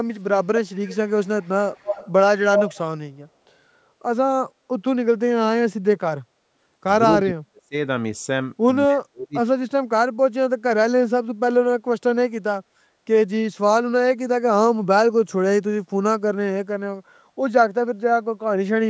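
Early on there's an echo leak: a delayed copy of the speech, about 246 ms behind, comes back at 0.87–1.49 s, 1.70–2.11 s and 2.53–2.78 s. It starts faint and grows until it's roughly as loud as the speech itself, likely because the far end's echo canceller didn't remove what its loudspeaker put into its microphone.

Later there's speech suppressed in double talk at 7.21–7.75 s and 8.87–9.35 s. The speech drops away very deeply, for about half a second the first time and about 0.4 s the second, likely because the canceller couldn't tell its own talker from the echo while both sides spoke and turned everything down.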